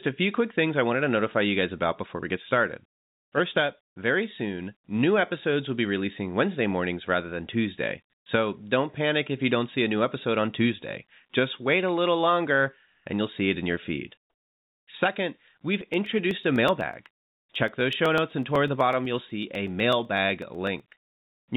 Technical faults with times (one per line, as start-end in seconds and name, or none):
12.94-13.06 comfort noise in place of the background
15.81-21.42 periodic USB or driver dropouts